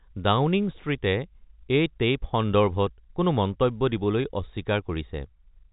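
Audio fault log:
No faults are present in this speech, which comes through a G.711 mu-law telephone channel at 64 kbps with nothing above about 3.8 kHz and, at most, a faint level-following quantisation hiss from the 8-bit logarithmic coding.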